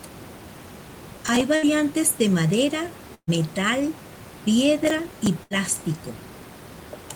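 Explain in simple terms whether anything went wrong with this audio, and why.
Gritty crackling bursts from 1.1 to 1.41 s and from 4.84 to 5.27 s are processor overload crackle. The computer fell behind, repeatedly replaying tiny scraps of old audio.

Brief held sounds that fade and then skip ahead, at 1.55 s just before "de madera", at 3.14 s right after "de madera", and at 5.43 s, are bursts of packet loss. Chunks of sound never arrived, so the last sound was stretched and faded out to cover each gap of about a tenth of a second.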